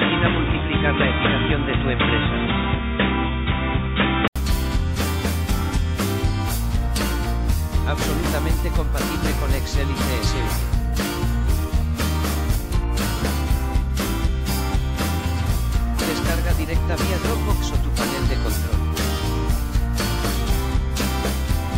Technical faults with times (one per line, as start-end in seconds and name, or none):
0.00-4.36 input switched to a poorer device